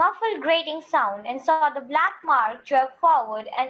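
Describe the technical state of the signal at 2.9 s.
At 2.9 s the speech sounds rough and muffled, topping out near 8 kHz: a call bitrate drop from 2.01 s onward starves the Opus encoder of bits.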